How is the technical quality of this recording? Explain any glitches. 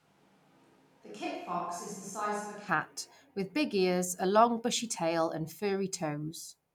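The recording has one clear fault: a switch to a distant microphone at the very start. From the opening until 2.67 s, the speech sounds roomy and hollow. The bass is thin. The level sits roughly 10 dB lower than later on. Room noise is more noticeable, at around 35 dB below the speech. At 2.67 s the sound jumps to a close, full tone. The likely cause is a close microphone that failed, leaving a farther one to pick up the audio.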